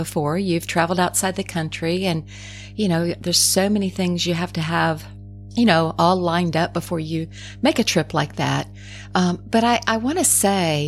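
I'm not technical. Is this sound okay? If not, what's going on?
No. There is mains hum running through the whole clip, from start to finish: a steady, low buzzing tone at 50 Hz sitting under the speech, fairly noticeable rather than faint. It comes from the electricity supply leaking into the recording, through a ground loop between connected equipment or a nearby transformer. The recording chain picks up the alternating current's rhythm and records it as a constant drone alongside everything else.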